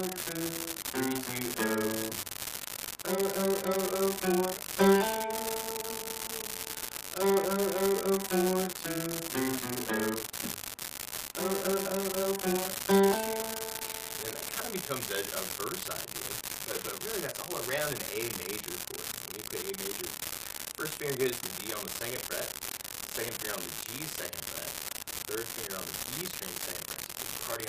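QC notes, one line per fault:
Throughout, unreliable data bit: there's a constant crackly fizz riding under everything, and it doesn't let up in the gaps either, so you'll hear it wherever the sound drops away. One data line looks marginal, so that bit flips wrong on a random scatter of samples. Every flip throws the sample off by the same amount, a step of about -13 dBFS, and all those identical spikes pile up into that steady crackle.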